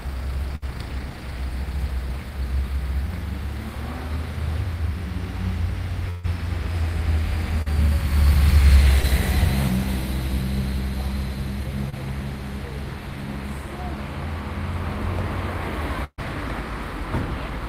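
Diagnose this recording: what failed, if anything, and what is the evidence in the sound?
Network trouble, showing up as burst packet loss at 0.55 to 0.64 s, 6.10 to 6.26 s and 16.04 to 16.20 s. The receiver stretches the last sound and fades it, and the third gap fades to silence for about 60 ms. Then playback jumps ahead, skipping roughly 60 to 140 ms each time.

There's also short concealed packet loss at 7.62 to 7.68 s, 9.02 to 9.06 s and 11.90 to 11.94 s, with 20 to 40 ms lost each time. The decoder patches each hole by extending what came before and blending back in. You hear a quick smear or wobble.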